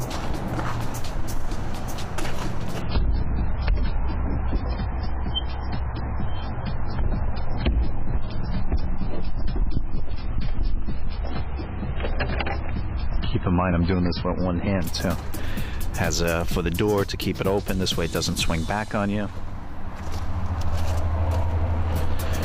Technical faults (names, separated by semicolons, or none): adaptive stream at a lower bitrate